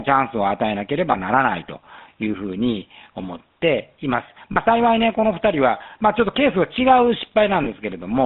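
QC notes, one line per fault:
Throughout: GSM full-rate codec. The speech carries a plainly audible buzzy, gravelly roughness. The decoder rebuilds the voice from a vocal-tract model driven by sparse, regular pulses, which fits 13 kbps full-rate coding. Sound is confined to 150 Hz to 3.7 kHz.
1.12–1.15 s, 4.52–4.57 s, 7.64–7.67 s: lost GSM frames. Each gap becomes a brief rough, metallic ring, not a dropout. The decoder repeats the last good frame. The first and last fit one 20 ms frame, the middle one two frames.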